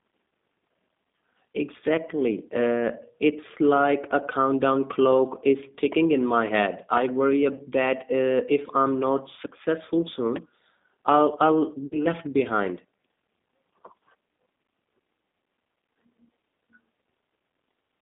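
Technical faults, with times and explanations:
Throughout: G.729 codec. The 8 kbit/s coder rebuilds speech from a filter, pitch and sparse pulses on a 200 Hz to 3.6 kHz line, so it sounds plainly rough, synthetic and muffled.
5.92–5.94 and 10.36–10.38: loud pop. A sudden voltage pulse, likely from a plug, switch, static or driver glitch, adds a sharp pop about 25 dB above the speech each time.
7.55–7.65: VoIP packet loss concealed by the speech codec. About 40 ms of audio went missing, which fits two lost packets. The decoder extended the last pitch and filter into a fading buzzy tone or coloured noise.
11.86–12.06: VoIP packet loss concealed by the speech codec. About 60 ms was lost, likely three packets, so the fill lasts longer and the speech stays weak or distorted afterwards.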